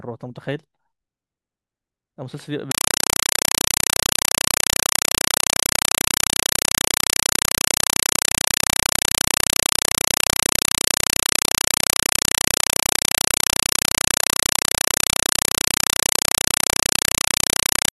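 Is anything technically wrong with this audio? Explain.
Yes. From 2.71 s to the end, compressed stream played as audio: an AC-3 bitstream, likely at 192 kbps, is treated as samples, giving 4 ms noise bursts at 31.25 Hz, heard as loud chattering static.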